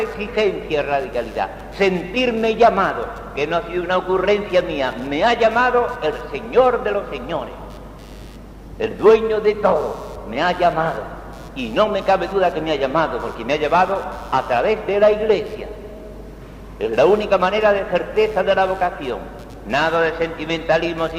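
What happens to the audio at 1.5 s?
At 1.5 s, computer activity noise is present, as it is throughout the clip: processor, graphics or mouse load is shifting the audio circuit's shared ground, adding a buzzy, chirping layer pulsing at around 100 times a second, roughly 35 dB below the sound.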